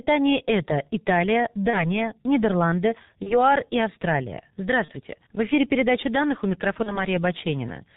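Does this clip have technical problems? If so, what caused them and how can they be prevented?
Yes. Throughout, the G.723.1 codec muffles the speech, with nothing above 4 kHz, blurred consonants and a hoarse texture, which fits its roughly 6.3 kbit/s coding. Unlike ordinary band-limiting, it also smears phonemes. Use a wideband codec such as G.722 or Opus.

Packet loss concealed by the speech codec causes stretched, fading patches of buzz or coloured noise at 1.70–1.86, 3.23–3.42, 4.85–4.91 and 6.83–7.05 s. Each points to a single lost 30 ms frame. Unlike a plain dropout, these gaps are filled with stretched sound that stays weak after recovery. Add a jitter buffer with FEC, or prioritise voice traffic.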